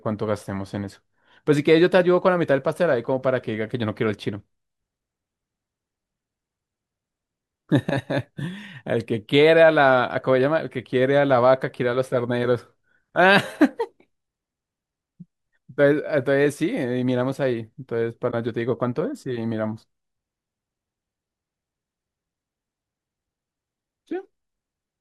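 Corrupt frame concealed at 18.30 to 18.34 s: damaged bits in the AAC stream were caught by the decoder, which filled the gap itself. The concealed stretch is about 36 ms long, fitting a single frame.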